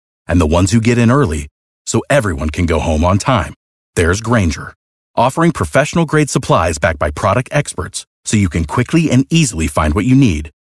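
Nothing stood out on listening to this speech recording.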